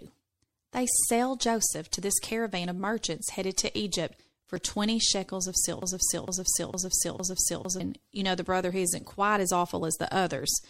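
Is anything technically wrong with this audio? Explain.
Yes, there are three faults.

Throughout, the speech sounds watery and swirly with a hard treble ceiling, likely MP3 compression at a low bitrate near 64 kbps. On a spectrogram, the top band is cut flat and the upper content is patchy.

At 4.56 s, damaged data in the compressed stream makes the decoder lose sync, producing a brief glitch that shows as a thin vertical smear on the spectrogram.

From 5.82 to 7.80 s, a broken-record loop repeats one 0.46 s fragment four times, likely from a stalled stream. The waveform shows identical repeating blocks.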